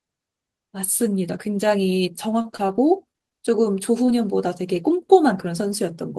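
Speech, and from 2.41 to 3.38 s it turns choppy and robotic. That's repeated packet loss: seven holes land close together, none longer than about 31 ms, and the receiver keeps patching each one by stretching the last bit of sound before the next hole arrives. Roughly a sixth of that stretch ends up as filler rather than real audio, so it sounds chewed up. Then at about 4.06 s there's a single short concealed packet loss, around 20 ms that never arrived in time. The decoder bridges it by carrying the previous sound forward and blending back in, which you hear as a quick smear or wobble, and anything very short in that instant can just drop out.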